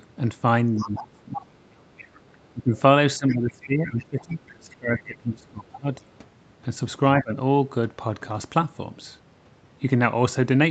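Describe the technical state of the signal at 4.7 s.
At 4.7 s the speech sits inside a stretch of speech suppressed in double talk, running from 2.54 to 5.89 s. The level dips deeply, by roughly 20 dB at worst, likely because the echo canceller could not separate the near-end talker from the overlapping loudspeaker echo and attenuated both.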